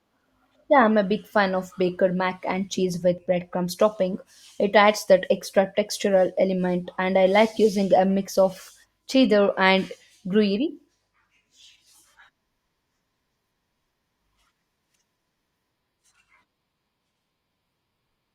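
At 12.75 s the speech drops abruptly to an adaptive stream at a lower bitrate, holding until the end with no gap at the switch. Codec artefacts rise, which fits Opus falling from about 64 to 24 kbit/s.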